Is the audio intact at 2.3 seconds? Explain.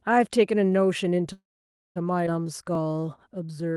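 No. Around 2.26 to 2.28 s there's a skip ahead. Roughly 400 ms of speech got dropped, either in transit or by an overfull jitter buffer, so playback lurches forward with the two sides stitched almost directly together by a tiny fill.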